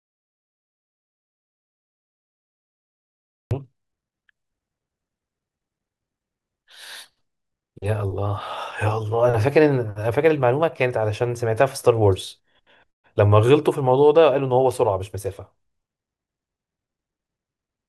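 The clip opens in silence, with no room tone, until 3.51 s, when speech enters mid-flow: an audio dropout to silence, likely from a lost input.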